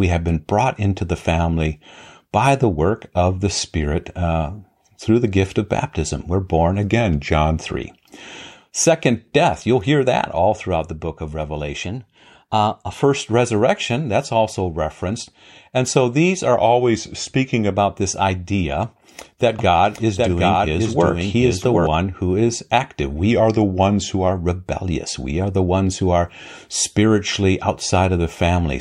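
A speech recording whose clock-matching software likely corrected drift in single rate jumps, giving drift correction steps. Speed and pitch move together by about 6% for roughly a second, then snap back. The speech drops about 110 cents flat at 6.84–7.57 s, rises 103 cents sharp at 11.84–13.05 s between "throughout the book of" and "resurrection that's also referenced", falls flat again at 16.56–17.71 s between "so these are" and "this idea that", and falls flat once more at 23.31–24.31 s after "who is active". A second, slower capture path probably mixed the sound in twice, giving a doubled audio track from 19.59 to 21.87 s. There, a dry, full-band copy at about the same level trails by roughly 0.7 s, starting and stopping abruptly.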